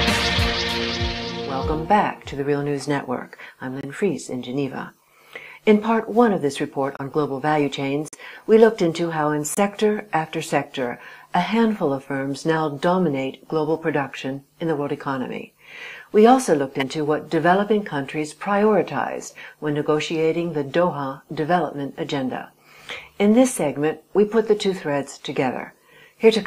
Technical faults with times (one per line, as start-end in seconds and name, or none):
3.81-3.85 corrupt frame muted
6.97-7.00 corrupt frame muted
8.08-8.15 corrupt frame muted
9.55-9.59 corrupt frame muted
16.80-16.83 corrupt frame decoded